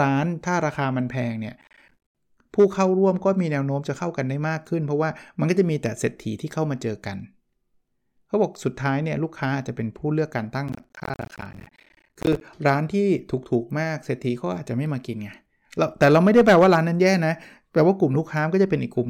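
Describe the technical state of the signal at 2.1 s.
At 2.1 s the speech is under processor overload crackle, running from 1.61 to 2.16 s: dozens of missed deadlines on buffers of around 10 ms leave hard-edged silent gaps, heard as gritty tearing. The waveform shows repeated flat dropouts, and the spectrogram shows dense broadband vertical stripes.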